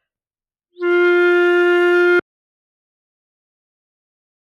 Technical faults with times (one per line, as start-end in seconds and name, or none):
2.19-4.41 audio dropout to silence